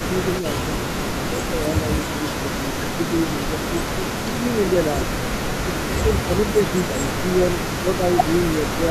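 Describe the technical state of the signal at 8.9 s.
At 8.9 s there's an echo leak running from 0.0 to 8.91 s: a faint copy trails the speech by about 377 ms, roughly 20 dB down, likely a loudspeaker echo the canceller missed. Overlapping it, from 8.71 s to the end, there's speech suppressed in double talk: the talker dips by a few dB in patches, likely the canceller ducking everything while both sides spoke.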